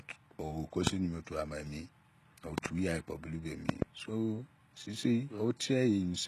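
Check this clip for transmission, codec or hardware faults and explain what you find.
Two faults are audible in the speech: codec damage across the whole clip and a series of loud pops.

From start to finish, the audio has likely passed through HE-AAC compression, at a rate that fits a stream of about 16 kbps. The encoder carries only the lower spectrum and rebuilds the treble by copying lower bands upward, shaped by a coarse envelope. Nothing is present above 12.3 kHz, and the rebuilt top end has harmonics that do not line up with those below. The damage is plainly audible, and sibilants come out gritty, metallic or lispy.

Loud pops occur at 0.87 to 0.89 s (a single pop), 2.58 to 2.68 s (two pops) and 3.69 to 3.84 s (two pops). Each is likely a sudden voltage step or pulse, such as from a plug, a switch, static or a driver glitch, added to the signal. The first peaks about 25 dB above the speech and the later pairs about 20 dB above it. 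They are heard as sharp pops or thumps on top of the speech, which continues underneath.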